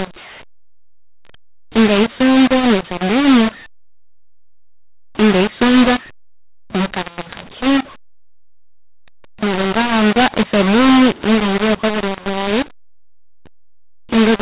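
A mu-law and A-law mix-up runs through the whole speech recording: G.711 telephone audio written as A-law is being read back as mu-law, so levels are scrambled, the voice turns harsh and distorted, and pauses fill with noise instead of silence.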